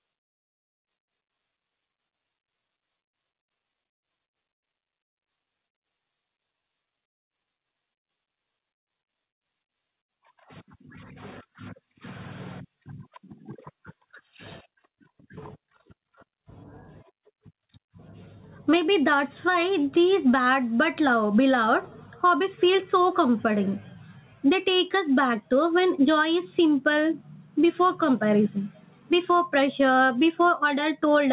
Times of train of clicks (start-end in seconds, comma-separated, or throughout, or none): none